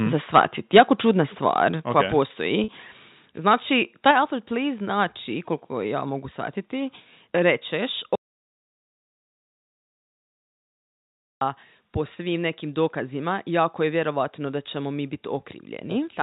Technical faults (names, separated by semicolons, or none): microphone overload; microphone volume stepped down; packet loss with pitch repetition; audio dropout to silence